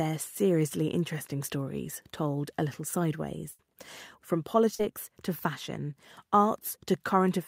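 A burst of packet loss runs from 3.51 to 3.61 s. Packets never arrived in time, so the receiver filled 74 ms by extending the last sound and fading it, heard as a held buzz or dying hiss. Speech resumes with 80 ms gone.

Short concealed packet loss follows at 4.75 to 4.81 s, where 40 ms of the call missed the decoder. The receiver patched 43 ms by continuing the preceding sound, then blended back into real audio, producing a brief smear or wobble.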